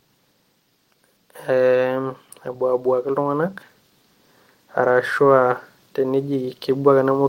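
Automatic gain rising occurs twice in this speech recording, first from 1.19 to 3.57 s and again from 4.74 s to the end. In each stretch the automatic gain control judges the input too quiet and lifts its gain gradually, so the voice and the background noise swell together over a couple of seconds rather than jumping. The first rise amounts to about 4 dB.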